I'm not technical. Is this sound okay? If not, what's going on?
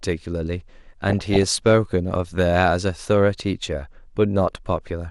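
No. Two things are wrong with this speech.

The whole clip sounds dull and plainly gurgly. That is MP2 compression, the squeezing method used for digital radio. It likely comes from saving the sound with too little data. To save space, it splits the sound into many narrow slices and drops the highest ones. The slices that remain are stored roughly. So the top end goes missing, and the rest gets a grainy edge.

There are also two short bursts of DAB burbling. The first runs from 1.09 to 1.54 s. The second runs from 4.77 to 4.87 s. They put short blips of noise over the speech. This happens when a weak radio signal lets errors slip into the data. Some of those slices then get short blips of noise.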